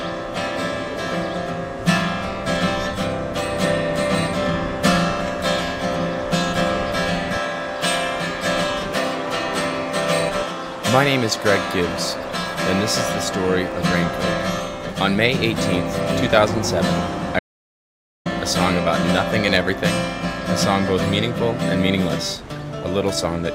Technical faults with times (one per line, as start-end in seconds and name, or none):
17.39-18.26 audio dropout to silence